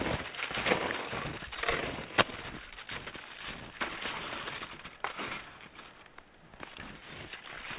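No technical faults are audible.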